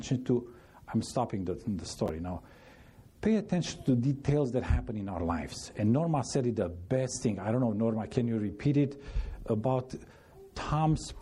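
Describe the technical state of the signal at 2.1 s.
Chunks out of order from 2.06 to 2.09 s: one 10 ms chunk played two chunks late, giving a brief jumbled blip with three hard joins.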